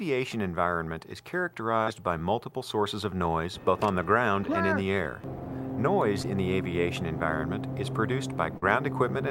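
Brief smears or wobbles at 1.83–1.88, 6.22–6.25 and 8.57–8.64 s mark short concealed packet loss: 20–40 ms of audio arrived too late, and the decoder extrapolated across each gap.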